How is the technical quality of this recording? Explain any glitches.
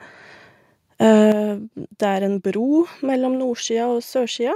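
The level drops twice in abrupt steps: a microphone volume stepped down at 1.32 s (about 7 dB) and 3.36 s (about 2 dB). The likely cause is call software cutting input gain, so speech and background fall together, with the waveform envelope stepping lower.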